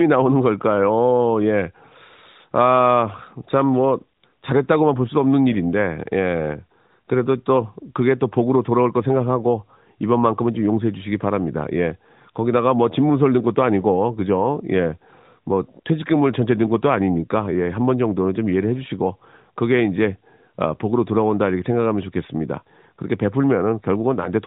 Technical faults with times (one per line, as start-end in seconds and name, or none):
none